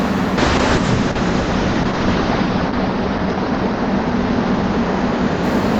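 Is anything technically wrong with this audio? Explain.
Yes. From 0.39 s onward the audio turns rough and muffled, with its top end cut near 8 kHz. This is a call bitrate drop, which fits the encoder falling from around 96 to 7 kbps.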